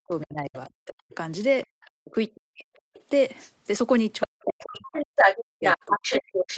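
Speech suppressed in double talk runs from 0.00 to 1.12 s, 2.01 to 2.95 s, 4.26 to 5.01 s and 5.59 to 6.33 s. Here the speech drops by as much as roughly 40 dB. The likely cause is an echo canceller that could not tell the near talker from loudspeaker echo while both were active, so it turned both down. The other side's voice leaking through is heard from 1.12 to 3.52 s, roughly 25 dB below the speech, and again from 4.21 s to the end at about the same level as the speech. The loudspeaker playback was likely not fully removed from the microphone, so a second voice rides along with the talker. Background gated by the echo canceller appears from 1.67 to 1.73 s, where the room sound drops by about 33 dB for around 70 ms. The canceller clamped the microphone hard while the loudspeaker played, then released it. Throughout, the Opus call path limits the audio to nothing above 8 kHz.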